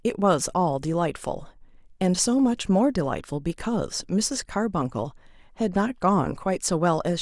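Nothing stood out as a technical fault anywhere in this speech recording on listening.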